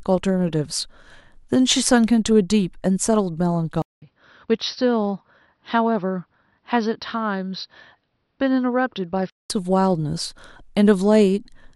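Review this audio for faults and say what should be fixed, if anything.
At 3.82 s the speech cuts to silence for about 0.2 s, then returns dull and boxy, with nothing above 5.8 kHz, a level roughly 5 dB lower, and a new background noise far below the speech. At 9.50 s the full tone comes back. This is likely an input switched to a poorer device. A filter or codec change would narrow the band but would not alter the noise floor and level or leave a gap. Lock the recording input to one device so the system cannot swap microphones mid-session.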